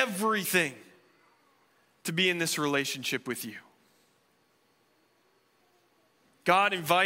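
Compressed frames skipped at 0.44 s in this speech recording: the sound jumps forward, dropping a little under 50 ms of audio, which fits a couple of whole 23.2 ms frames that were missing from the file or refused by the decoder as damaged. Because adjacent frames overlap, the splice is heard as a brief smeared blip with a slight forward lurch in timing, not a sharp click.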